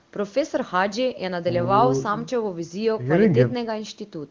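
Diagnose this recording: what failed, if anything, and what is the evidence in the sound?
Nothing failed; no fault is audible in this recording.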